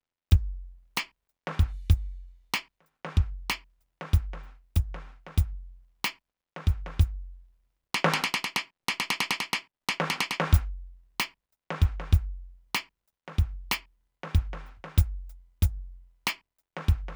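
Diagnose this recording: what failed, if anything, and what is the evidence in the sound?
Nothing in this music recording points to a failure at any stage of the chain, so there's nothing to diagnose here.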